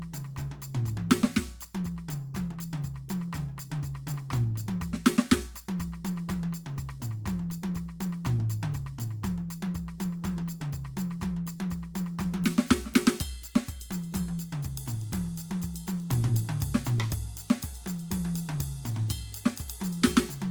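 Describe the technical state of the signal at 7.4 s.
At 7.4 s the music carries the same fault it has from start to finish: low-bitrate audio saved at a high bitrate. The content reaches up to about 20.2 kHz, so the bandwidth looks generous, but the artefacts of the earlier lossy coding are still there. That likely comes from an earlier low-rate Opus pass, consistent with around 32 kbit/s, later wrapped in a 256 kbit/s MP3 that can't restore what was discarded.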